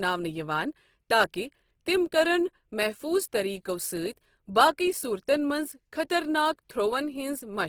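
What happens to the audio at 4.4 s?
At 4.4 s the speech carries the same Opus compression damage heard across the whole clip: a plainly audible rough, grainy texture, with voiced tones turning noisy rather than swirling. The spectrum still extends to about 20.4 kHz, so there is no muffling. This is likely the codec's CELT music mode running short of bits, preserving each band's energy but filling the detail with folded or noise-like content, which fits a rate of about 16 kbps.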